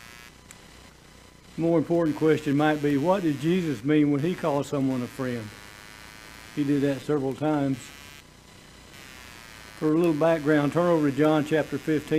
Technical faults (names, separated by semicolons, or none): computer activity noise